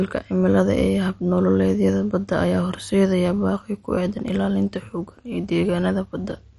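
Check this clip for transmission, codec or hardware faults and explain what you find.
One fault runs through the whole clip: MP2 compression damage, plainly audible. Nothing reaches above about 11.3 kHz, so the speech sounds dull, and the remaining upper bands carry a gurgling, granular roughness. The likely cause is MPEG Layer II coding starved of bits, which fits a rate near 48 kbps. It shuts off whole upper sub-bands and coarsely quantises the rest. Unlike a simple low-pass filter, which only dulls, this adds flickering, grainy distortion to what remains.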